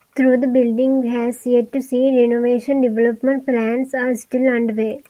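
Nothing in this speech clip stood out as a technical problem on listening.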